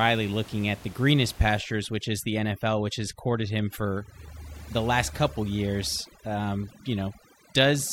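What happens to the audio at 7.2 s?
At 7.2 s, overdone noise removal is active, running from 1.59 s to the end: the over-strong suppressor mutes bands near its noise estimate, leaving twinkling specks and a spectrogram pocked with dark holes.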